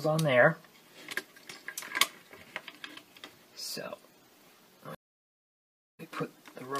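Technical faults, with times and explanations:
4.95–6.01 s stream reconnect: 1.04 s of silence, then a fresh decoder fades the audio back in with roughly nothing skipped, unlike a dropout's abrupt cut and return.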